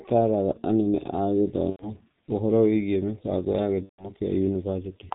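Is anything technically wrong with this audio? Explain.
Yes, there are two faults.

Throughout the clip, the speech carries heavy G.723.1 codec damage. The codec discards everything above 4 kHz and sends a coarse vocal-tract model refreshed only every 30 ms. At this degree of degradation, which fits a rate near 6.3 kbit/s, the speech is muffled and hoarse. Consonants smear together because short transients fall between the slow model updates.

VoIP packet loss concealed by the speech codec occurs twice. From 1.70 to 1.87 s, about 90 ms of audio is missing, consistent with three consecutive 30 ms frames. From 3.83 to 4.10 s, just after "mĩbango ya", about 150 ms is missing, consistent with five frames. In each gap the decoder repeats its last pitch and filter at falling gain. The speech stretches into a fading buzzy tone or coloured noise, and because the decoder rebuilds its state gradually, it stays weak or distorted briefly after real packets resume.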